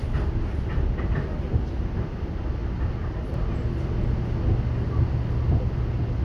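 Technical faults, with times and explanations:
3.34 to 6.24 s, doubled audio track: from 3.34 s a second full-band copy of the sound cuts in abruptly, trailing by about half a second and roughly 10 dB quieter. It has no decay or room colour, so it's likely a slower capture path or an edit leaving two copies overlapping.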